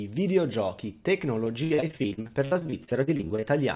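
From 1.44 to 3.44 s there's repeated packet loss giving a robotic, choppy sound: dozens of short dropouts, up to about 62 ms each, patched by stretching the last bit. The band stops at 4 kHz, which fits a G.711 call path.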